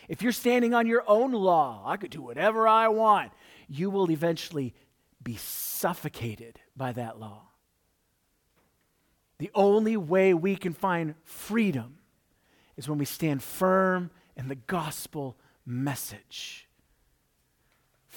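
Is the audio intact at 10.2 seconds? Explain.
Yes, the audio is intact at 10.2 seconds, with the speech running through that moment without any audible dropout, click, distortion or other disturbance.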